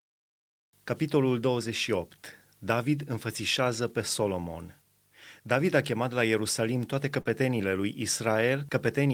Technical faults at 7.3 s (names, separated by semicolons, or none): short concealed packet loss